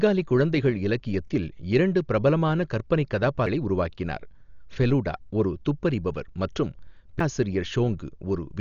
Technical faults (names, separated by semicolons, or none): Dolby Digital compression; CD skip